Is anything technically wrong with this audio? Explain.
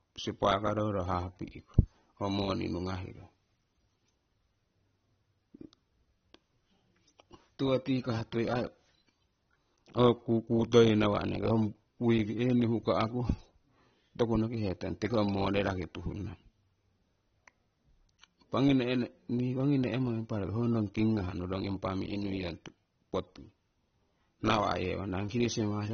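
Yes. Throughout the speech there is nothing above about 6.3 kHz, and the band below carries the smeared, watery texture of heavy lossy coding. This is most likely low-bitrate audio saved at a high bitrate: a first pass through a low-rate codec, consistent with AAC at around 24 kbit/s, removed the upper band and left its artefacts, and the later MP3 at 192 kbit/s stored that damage faithfully without restoring anything, so the file is large but sounds band-limited and coarse.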